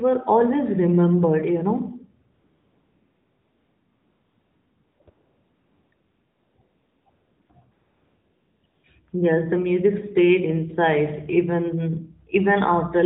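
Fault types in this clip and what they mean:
AMR comfort noise: during pauses the phone stopped sending speech frames and the far end filled in synthetic hiss. Here it happens ten times between 2.34 and 9.1 s, with gaps from 20 ms to 2.66 s, so the background flips to smooth, even noise and back.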